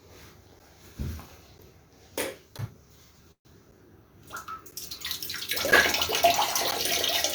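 From 0.59 s to the end, periodic USB or driver dropouts cut brief silent gaps every 1.0 s. Audio is genuinely lost, unlike a freeze, so the regular ticks mark missing sound.

At 3.31 to 3.47 s, a call audio freeze stretches the last sound into a fading buzz, then about 110 ms of silence, likely from a drained jitter buffer. Nothing is lost; playback resumes 136 ms late.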